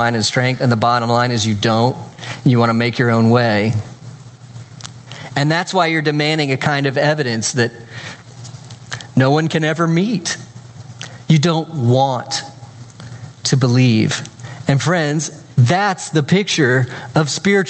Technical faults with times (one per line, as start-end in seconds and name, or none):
0.00-17.70 gain pumping